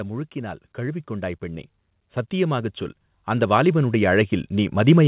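From 0.33 to 1.48 s, automatic gain rising lifts the level by about 4 dB as the gain control, judging the input too quiet, raises its gain step by step. A second rise begins at 2.3 s and continues to the end. Voice and background noise swell together, and that shared, gradual climb marks it as gain control rather than a speaker growing louder. It keeps climbing instead of pumping back down.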